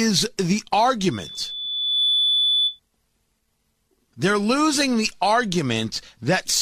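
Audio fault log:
1.11–2.80 s, loudspeaker feedback squeal: a single 3.5 kHz tone swells over about a second to roughly speech level, a fixed-pitch loop resonance, unlike a whistle from interference.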